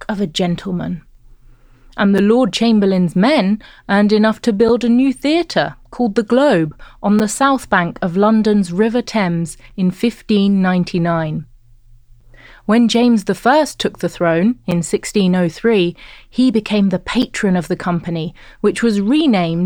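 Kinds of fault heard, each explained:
Gap between chunks: the speech is split into pieces 2.5 s long. Each join leaves a hard-edged silent hole of 7 ms, heard seven times.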